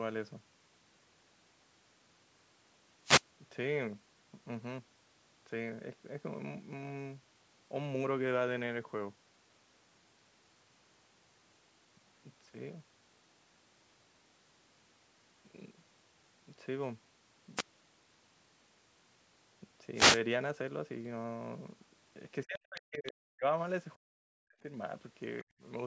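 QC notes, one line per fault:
22.44–23.44 s, 23.97–24.64 s and 25.43–25.63 s, speech suppressed in double talk: with both ends talking at once, the echo canceller likely could not tell the near talker from the loudspeaker echo and clamped the whole microphone path. The speech falls away by about 40 dB at its deepest, for roughly a second, then 0.7 s, then 0.2 s. It sounds dulled and broken into pieces.
22.76–22.8 s and 23.06–23.12 s, other side's voice leaking through: during the first suppressed stretch, residual echo that the canceller likely failed to subtract from the loudspeaker pickup slips into the microphone signal. Two brief scraps of a second voice surface, one at about 20 dB below the speech and the other at about 15 dB below it. Each lasts only tens of milliseconds. The speech itself carries nothing above 8 kHz, in keeping with the call's microphone chain.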